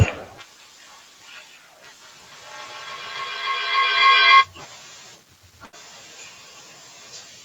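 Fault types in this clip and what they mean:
Feedback echo between two devices: Two devices on the same call share one room, so one plays back the other's microphone signal and that microphone hears it again. Each device's echo canceller only removes its own playback, so the loop is never broken. From 2.32 to 5.0 s the speech returns roughly every third of a second, thinner and more ringing each pass. The repeats build instead of fading, peaking about 27 dB above the speech.
Burst of packet loss: A short run of audio packets never arrived in time to play. At 5.65 s the receiver covers the gap by stretching the last sound for 72 ms while turning it down. Playback resumes at 5.75 s, with 80 ms of speech simply gone. The jump from the concealed tail to the resumed speech sounds like a small skip.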